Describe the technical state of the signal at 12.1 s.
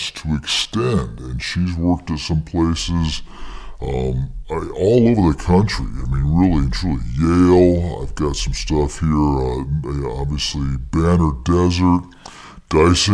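At 12.1 s the speech has a wrong sample rate, as throughout the clip. It runs at 0.69 times speed, about 6.5 semitones low. This fits 32 kHz audio played at 22 kHz.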